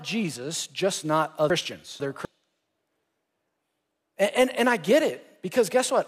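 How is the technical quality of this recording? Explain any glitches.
The recording has one clear glitch: chunks out of order between 1.5 and 2.25 s, just after "just not". A 250 ms block plays two blocks late, so the speech there sounds briefly jumbled, with three hard joins. The waveform shows abrupt steps at those joins. The spectrogram shows thin vertical broadband lines where formant tracks break and resume mismatched.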